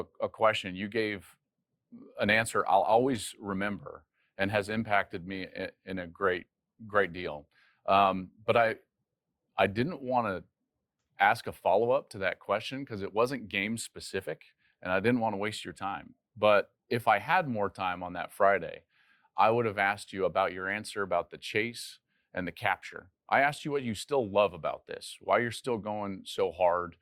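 From 2.07 to 10.07 s codec artefacts rise suddenly without any gap, which fits an adaptive stream at a lower bitrate, roughly halving the Opus rate.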